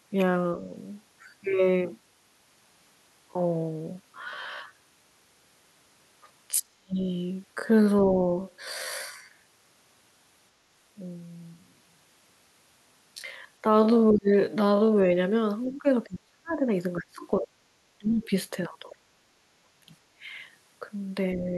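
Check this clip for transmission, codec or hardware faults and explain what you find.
There are three problems here: a slowed-down stretch at the start, repeated dropouts where an echo canceller clamps down during double talk, and one brief scrap of the far end leaking in.

From 0.0 to 15.1 s there's a time-stretched section. The audio plays at about 0.55x speed while the pitch holds steady. That's most likely stretching software padding the audio to fill a length by repeating short slices. Because the pace roughly halves without any drop in pitch, the sound comes across dragging. It snaps back to normal pace right after 15.1 s.

Speech suppressed in double talk shows up at 6.59–6.99, 14.11–14.33, 15.71–16.62, 16.98–18.32, 19.17–19.88 and 21.36–21.55 s. The likely cause is an echo canceller that couldn't separate the talker from loudspeaker echo while both sides spoke, so it turned everything down. 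Most of these dips are deep, somewhere between 25 and 40 dB. The last one is only a slight dip.

At 18.90–18.96 s there's a quick blip of the other side's voice leaking through, sitting roughly 25 dB under the talker. It's faint, probably loudspeaker sound that the echo canceller didn't fully remove from the mic.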